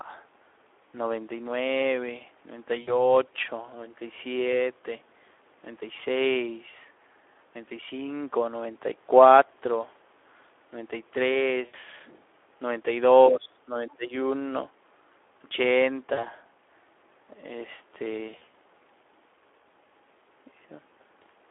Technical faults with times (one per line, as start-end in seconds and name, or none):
0.00-21.50 Speex codec
2.81-2.96 VoIP packet loss concealed by the speech codec
11.65-11.75 VoIP packet loss concealed by the speech codec
13.28-14.13 speech suppressed in double talk
13.89-13.94 other side's voice leaking through
16.13-16.26 VoIP packet loss concealed by the speech codec
18.29-18.54 VoIP packet loss concealed by the speech codec